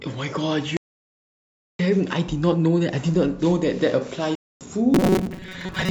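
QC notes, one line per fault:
0.77–1.79 s and 4.35–4.61 s, block of digital silence. The sound drops to silence, first for about 1.02 s, then for 256 ms. There is no fade at either end. Each cut leaves a dead hole.
4.94 s to the end, robotic sound from repeated short buffers. The speech becomes a stiff metallic buzz at 188 Hz that still follows the speech's rough shape. This is likely a roughly 5.3 ms buffer being replayed, with about half the real audio skipped.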